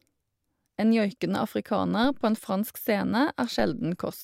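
At 3.60 s there's a DC step: the waveform's zero line jumps by about -28 dBFS, giving a low thump, then eases back as a 2 Hz high-pass drains it.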